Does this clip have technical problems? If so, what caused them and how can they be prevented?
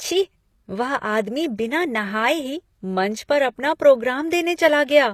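Yes. Throughout the speech, the upper range sounds synthetic: s sounds come out gritty and lispy, with a metallic sheen, and nothing is present above about 14.9 kHz. This is likely HE-AAC compression at a low bitrate, around 24 kbps. The codec stores only the lower spectrum and fills in the treble by copying lower bands upward and shaping them roughly, so the high harmonics no longer match the real ones. Encoding at a higher bitrate, or with plain AAC or Opus at a comfortable rate, would prevent it.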